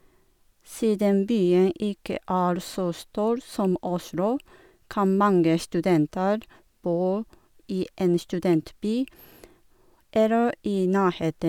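Nothing in the speech stood out as a technical problem on listening.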